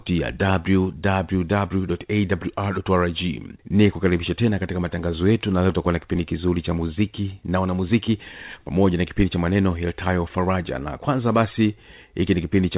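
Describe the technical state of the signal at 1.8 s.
At 1.8 s the speech is intact, with no dropout, glitch or distortion, only the narrowband sound of the G.711 mu-law call path, which carries nothing above 4 kHz.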